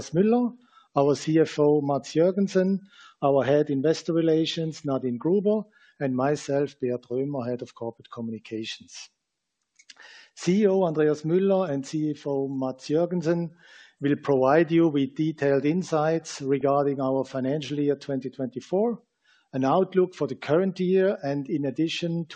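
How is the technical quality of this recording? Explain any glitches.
There is one glitch. At 16.61 s there is a brief burst of DAB burbling, a few watery blips. Weak reception let a small share of bit errors slip past error correction. Wrong samples put short blips of noise in single sub-bands.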